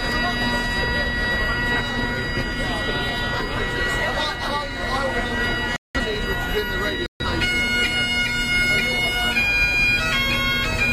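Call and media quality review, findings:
Corrupt frame muted, 5.76 to 6.01 s: abrupt drop to silence in the everyday sound, about 0.24 s, timing intact after. Decoder likely rejected bit-damaged compressed frames and the player zero-filled them. Length fits roughly four frames.

Corrupt frame muted again, 7.06 to 7.25 s: same hard cut into silence, about 0.19 s, consistent with around three rejected frames. Points at the transport or storage path flipping bits before decode. Worth checking checksums upstream.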